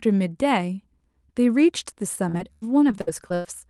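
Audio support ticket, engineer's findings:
Repeated packet loss (robotic sound), 2.15–3.46 s: choppy speech with pieces missing; eight gaps, longest 99 ms, about a quarter of span concealed. Jitter buffer/PLC extending last frame. Spectrogram: smeared, repeated harmonic blocks; waveform: flat-envelope patches. Opus band edge near 12 kHz.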